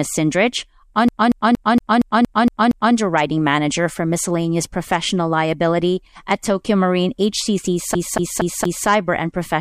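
CD stuck on one turn, at 1.09 to 2.95 s and again at 7.95 to 8.88 s: the laser jumps back a track, repeating the same 0.23 s of speech eight, then four times, with short mutes between each stutter.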